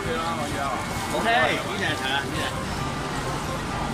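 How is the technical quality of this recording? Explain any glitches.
There's one clear glitch: a short run of CD scratch ticks between 1.20 and 1.86 s. You get six little clicks in that stretch, evenly spaced at roughly seven or eight a second. The longest is only about 5 ms, so they read as ticks rather than gaps. That steady rhythm is the giveaway. A blemish on the disc wipes out more data than error correction can rebuild, once per revolution, and the player interpolates or mutes those samples each time.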